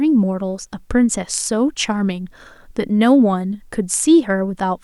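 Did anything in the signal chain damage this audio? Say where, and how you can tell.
No, nothing in the signal chain audibly damaged this speech recording, and no stage left any trace of a fault.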